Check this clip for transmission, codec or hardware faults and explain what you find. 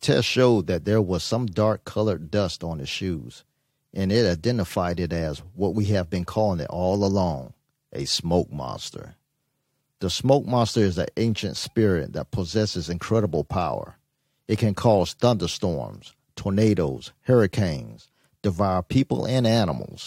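No faults detected here.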